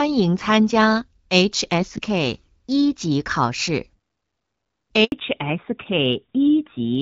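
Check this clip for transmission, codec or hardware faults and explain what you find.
Two faults turn up late in this speech clip: a short dropout followed by a permanent loss of bandwidth.

Handover gap, 5.04 to 5.12 s. The call appears to have switched from one network link to another, and no speech frames were delivered during the changeover. The audio falls away within a few tens of milliseconds and stays silent for about 80 ms until the new link begins carrying sound. Whatever was said in that window is gone.

Fallback to narrowband, from 5.12 s to the end. After the handover the call left HD Voice for an older narrowband codec. Before this point the wideband path sounds clear, consistent with AMR-WB at about 12.65 kbit/s. Afterwards nothing above 4 kHz remains, so the speech sounds duller, more muffled and rougher. That is consistent with AMR-NB at a low rate, around 7.4 kbit/s.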